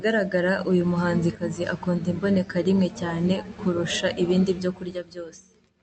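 No faults detected: the level moves are smooth and deliberate, and the speech's top end stops near 8 kHz, consistent with a band-limited call codec operating as designed.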